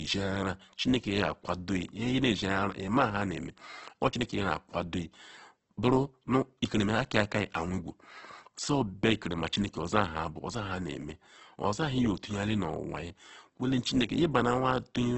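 From start to finish the speech sounds rough and grainy, with a noisy texture on every syllable and nothing above about 8.2 kHz. That's likely Opus compression in its music mode, squeezed hard at a rate that fits roughly 12 kbps, filling starved bands with noise.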